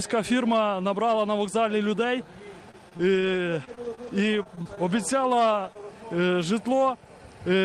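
From 2.71 to 5.77 s there are scattered short gaps: around ten brief packet losses, none much over 20 ms, each patched by extending the preceding sound. They come through as isolated ticks and small smears, unlike a single long dropout, which would leave one obvious hole.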